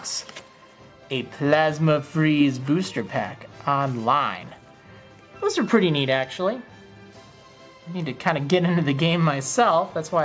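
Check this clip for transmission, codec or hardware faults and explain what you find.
No faults detected here.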